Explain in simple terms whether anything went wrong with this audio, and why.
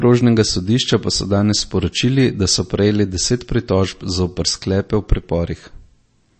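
Something did go wrong, and it lasts through the whole clip. The speech has no treble above about 8.3 kHz, so it sounds dull and boxed-in. Crisp sounds like s and t come out blurred and metallic, with a watery, swirling texture behind the voice. The likely cause is MP3 compression at a low quality setting. The encoder cuts off the highest frequencies at a fixed point, and when it runs short of data it discards quieter detail, which flickers in and out and produces that swirl.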